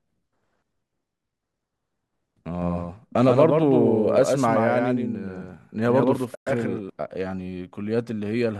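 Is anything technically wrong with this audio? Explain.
Yes, two faults stand out in this speech.

A doubled audio track runs from 2.62 to 6.90 s. A second full-band copy of the speech trails the original by about 150 ms, roughly 5 dB quieter. This is likely from a second, slower capture path mixing the signal back in. It sounds like a dry, echo-free slapback that starts and stops abruptly.

AAC frame loss with muting occurs from 6.35 to 6.47 s, inside the doubled stretch. The decoder zeroed the spectrum for the missing frames, so about 120 ms of sound fades out and back in through the overlapping windows. The result is a soft-edged gap.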